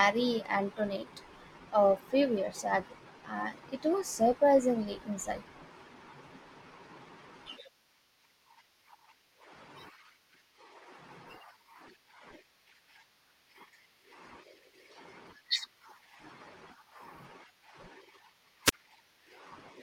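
Near 18.65 s, a brief burst of static swells and drops into about 23 ms of silence before the speech resumes: a wireless microphone squelch dropout, the fading radio link muting the receiver.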